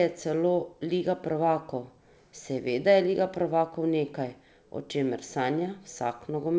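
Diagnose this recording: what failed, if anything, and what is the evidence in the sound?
Nothing in this speech recording points to a failure at any stage. It has passed through a WebRTC call path whose codec leaves no content above 8 kHz, which fits G.722 wideband coding at 64 kbps.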